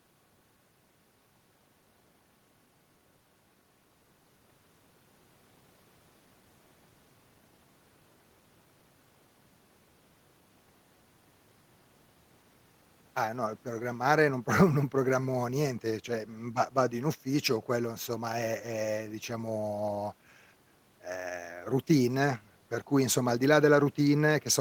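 No technical faults are audible anywhere in this speech recording.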